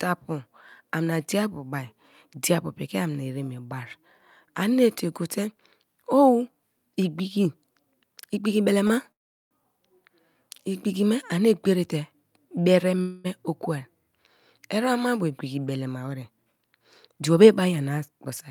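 At 8.87 s the speech briefly holds in place: a short stall from a late packet. The next packet missed its slot, the jitter buffer emptied, and the receiver stretched the last sound for about 24 ms until the packet arrived, then carried on with nothing lost. It comes across as a tiny drawn-out hitch with a slight buzz or dip. In the waveform a few near-identical cycles repeat. On a spectrogram the harmonics run flat for a moment instead of following the voice.

Two call audio freezes follow. From 9.11 to 9.53 s, about 394 ms of waiting is filled. A short buzz trails off into roughly 380 ms of silence before the speech resumes exactly where it stopped. From 13.01 to 13.26 s a 230 ms freeze never reaches silence: a buzz fades without going silent. The likely cause in both is packets held up in transit, which starved the jitter buffer. On a spectrogram each shows frozen horizontal harmonic bands that fade, and in the first case they give way to a blank strip. 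The waveform shrinks to a decaying, then flat, envelope.

After "eremmabu igbiki", from 15.88 to 17.91 s, a jitter buffer speed-up plays the audio about 9% fast. The buffer had built up excess audio. The receiver trimmed it by cutting small pitch-period-length slices, removing about a fifth of a second in total. The speech sounds hurried at an unchanged pitch. A spectrogram shows syllables squeezed closer together with the pitch contour intact. The waveform shows small splice points at many places.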